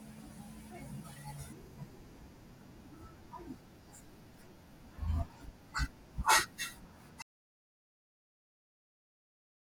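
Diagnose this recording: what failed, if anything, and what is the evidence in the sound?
The speech stops abruptly at 7.22 s and never returns: an audio dropout to silence that runs to the end of the recording. From that point the waveform is flat and the spectrogram is blank, with no room tone or noise floor, so the input was lost rather than merely quietened. The failure is likely on the capture side, a disconnected device or failed link, while the recorder kept writing silence.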